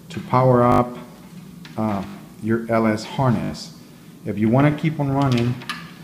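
New audio failed to reach the playback device in time on four occasions, so it replayed its last buffer of about 20 ms. This is a repeated buffer fault. At 0.72 to 0.80 s that piece sounds four extra times, at 2.08 to 2.14 s and 3.44 to 3.50 s three extra times each, and at 4.72 s once more. Each repeat meets the next with a hard join, giving a brief buzzing stutter. Little or nothing is lost, as the sound resumes where it stopped.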